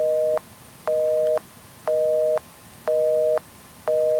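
No technical faults can be heard anywhere in this recording of sounds.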